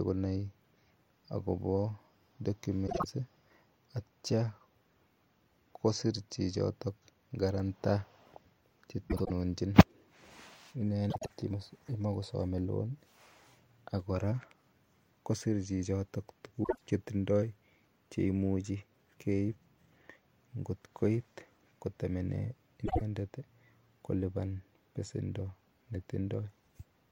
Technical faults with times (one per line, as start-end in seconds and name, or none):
2.87-3.05 frames out of order
9.09-9.30 frames out of order
11.10-11.30 frames out of order
16.64-16.81 frames out of order
22.85-23.02 frames out of order